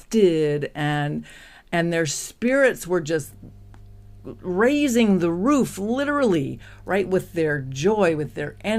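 From 3.24 s, just after "and their spirits were", a mains hum enters and runs to the end at 8.78 s. A ground loop or a nearby transformer is coupling the 50 Hz power line into the signal, leaving a steady low tone with some low harmonics about 25 dB under the speech. Unlike broadband rumble from handling or wind, it holds one fixed pitch and a constant level.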